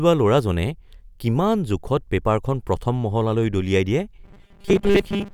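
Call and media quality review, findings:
Robotic sound from repeated short buffers, 4.24 to 5.34 s: speech becomes a rigid metallic buzz near 200 Hz. Likely cause is starved playback repeating a 5 ms chunk, so most of the real audio there is skipped.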